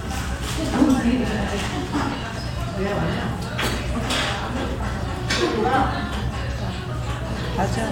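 Listening to this recording of everyday sounds, nothing stood out as a technical problem.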